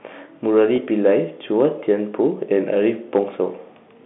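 At 0.76 to 0.78 s, a gap of about 20 ms, consistent with a single lost packet, shows packet loss with pitch repetition: the receiver filled the hole by repeating the last pitch period. The speech briefly holds on one slightly buzzy, frozen tone before resuming.

From 2.53 to 3.19 s, the level runs about 3 dB past what a stage in the chain can pass, causing hard clipping that flattens the tops of the loudest peaks. The added upper harmonics come through the G.711 telephone band as crackly roughness on peaks.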